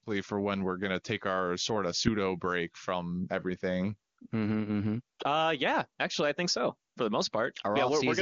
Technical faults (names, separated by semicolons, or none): none